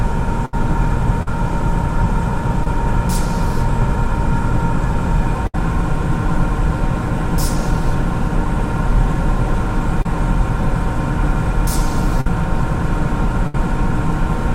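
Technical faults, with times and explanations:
0.45 to 0.54 s, 5.47 to 5.55 s, 12.21 to 12.27 s and 13.47 to 13.55 s: burst of packet loss. Each time a run of packets arrived too late or not at all, about 80, 70, 50 and 70 ms worth. The receiver kept stretching the last bit of sound, fading it down, so you get a held buzz or dimming hiss. Then the audio picks up further along, with the stretch in between simply gone.
1.23 to 1.28 s, 2.64 to 2.67 s and 10.02 to 10.06 s: short concealed packet loss. These are tiny holes of about 40, 20 and 30 ms that didn't reach the decoder in time. The receiver patched each one by carrying the preceding sound forward, as continued pitch or shaped noise, then crossfading back into the real signal. So you hear a quick smear or wobble, and any very brief sound in that window may just vanish.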